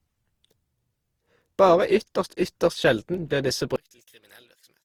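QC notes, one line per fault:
Throughout: generation loss. The sound is swirly, hollow and smeared on attacks, worse than 48 kbit/s Opus alone would give. It was likely re-encoded around seven times, with errors piling up.
3.76–4.84 s: one channel inverted. Right after "ytterst sjelden blir disse" the mono sum drops about 28 dB and the centred sound cancels out. This is likely a polarity flip on one side.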